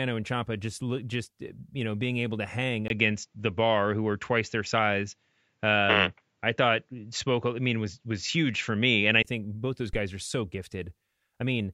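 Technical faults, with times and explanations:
2.88–9.25 s, input switched to a poorer device. After "being able to hang", a 20 ms gap opens and the sound turns dull, with nothing above 7.6 kHz. The level shifts by about 5 dB and a faint new noise floor appears. A narrower-band microphone is the likely cause. Full bandwidth returns at "think both those".
9.93–10.00 s, phantom power thump. Between "think both those" and "are so", a deep thump sounds. A supply was switched on a live input, and the voltage step passed through the coupling capacitors. The thump dies away within about 15 ms.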